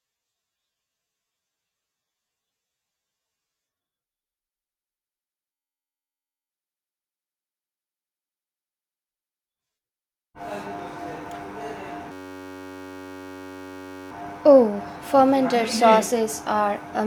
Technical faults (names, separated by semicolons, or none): system hang loop